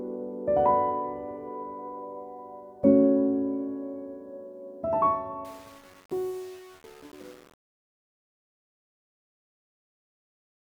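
Truncation distortion on a fade, 5.45 to 10.63 s: an undithered gain stage, consistent with 7 bits, reduces the fade-out to coarse steps, leaving a gritty tail.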